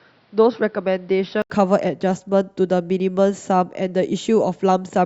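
A speech recording whose first 1.5 seconds, from 0.0 to 1.5 s, sound dull and boxy, with nothing above 5.8 kHz, a level roughly 5 dB lower and a faint background noise roughly 40 dB below the signal. At 1.5 s an 80 ms silence precedes a sudden return to full brightness, most likely an input switched to a poorer device and then back. A spectrogram would show a hard ceiling at 5.8 kHz that lifts abruptly after a narrow blank gap, and the waveform a small step up in amplitude there.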